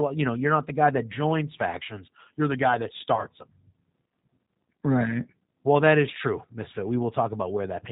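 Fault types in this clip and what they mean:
G.729 codec: The whole clip carries the sound of a low-rate speech codec that rebuilds the voice from a vocal tract model, a pitch predictor and a few pulses per frame instead of sending the waveform. The damage is plainly audible: a slightly rough, synthetic texture with nothing above 4 kHz, which fits an 8 kbit/s G.729 stream. Simple band-limiting would only muffle the speech, and a transform codec would smear or swirl it. This one sounds artificially rebuilt.
VoIP packet loss concealed by the speech codec: From 3.15 to 3.23 s, audio is missing and the decoder fills the gap by extending its last pitch and filter settings at falling gain. The speech turns into a brief buzzy or coloured smear that fades, and the loss fits two missing 10 ms frames. A plain dropout would leave silence or a click. Here the gap is papered over with synthetic, decaying sound carrying the previous frame's character.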